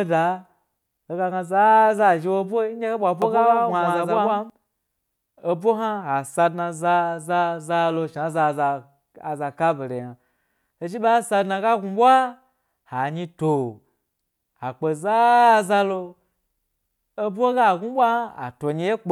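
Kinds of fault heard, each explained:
Doubled audio track: the same speech was likely mixed in twice, with a second copy carried by a slower path arriving late and summed with the original. From about 3.22 s, just after "hoe bwa", until about 4.50 s, a full-band copy trails the direct sound by roughly 150 ms at much the same level. It has no decay and no room colour, so it reads as a crisp stutter rather than an echo, and it cuts in and out abruptly at each end.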